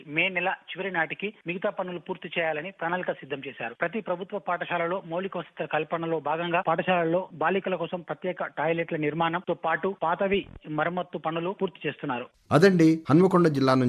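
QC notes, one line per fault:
No technical faults are audible anywhere in the clip, and the signal holds continuity throughout.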